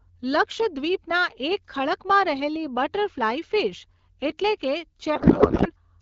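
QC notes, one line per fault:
5.15 to 5.71 s, codec payload misread: the speech turns to garbled noise and warble that barely tracks it. The decoder is reading AMR-WB frames with the bits packed differently from the sender's, which points to octet-aligned frames parsed as bandwidth-efficient. Clear AMR-WB speech, fitting about 12.65 kbit/s, returns afterwards.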